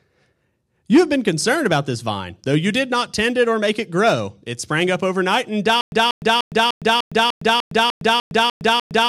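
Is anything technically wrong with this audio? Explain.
Yes. From 5.81 s to the end, a stutter with silent gaps: a 188 ms burst repeats every 299 ms with 111 ms of digital silence, likely a stalled stream replaying its last fragment, unlike a gapless loop.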